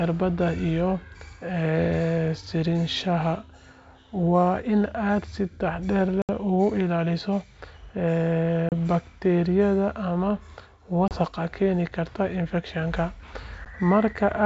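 Packet loss on an ADPCM call breaks this wideband speech recording. Dropped packets were filled with silence, and the receiver's adaptive predictor and step size drifted away from the sender's. The result is four hard-edged gaps at 6.22–6.30 s (about 70 ms missing), 8.69–8.73 s (about 30 ms), 11.08–11.17 s (about 30 ms) and 13.65–13.67 s (about 10 ms). After each gap the speech comes back with brief, slight distortion before it settles. The G.722 coding keeps its clear band up to 7 kHz.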